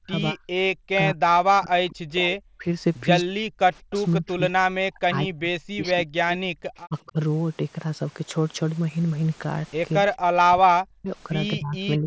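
From 0.0 to 2.65 s, 3.29 to 3.6 s, 4.17 to 7.18 s and 10.01 s to the end, the speech sinks by as much as 40 dB or so and cuts out in pieces, likely speech suppressed in double talk as the canceller ducks everything while both sides talk. At 3.9 to 3.96 s there's a faint scrap of echo leak, a copy arriving 217 ms late at about 25 dB down, likely loudspeaker pickup the canceller missed.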